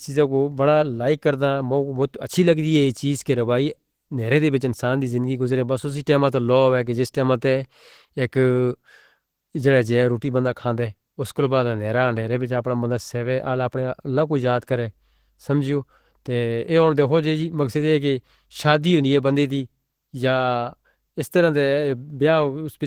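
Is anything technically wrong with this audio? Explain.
Yes. Opus compression damage is plainly audible across the whole speech clip, from start to finish. The sound is hoarse and muffled in its body, while the upper range turns grainy and hissy. This likely comes from a low-rate Opus encode in hybrid mode, around 16 kbps. The lower band is coded as speech, and the highs are filled with band-energy noise. On a spectrogram, harmonics blur into noisy texture above the low band rather than leaving gaps, though energy still reaches the top of the band. The waveform shows no clipping or dropouts.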